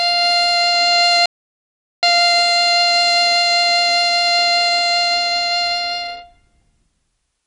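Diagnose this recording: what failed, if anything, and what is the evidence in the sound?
The music is band-limited for the whole clip, with nothing above about 10.6 kHz, and the codec damage is plainly audible as a watery, swirly texture with smeared attacks. The stage is the codec, likely MP3 compression at a low bitrate, around 36 kbps. With so few bits available, the encoder cuts off the treble at a fixed frequency and drops weak spectral lines that flicker between frames.

From 1.26 s to 2.03 s, about 0.77 s, the music cuts out to silence with no residual noise floor, then resumes mid-flow. This is an audio dropout to silence at the capture or input stage, likely a lost connection or stray mute while the recorder kept writing silence. Whatever played during that gap is not recoverable.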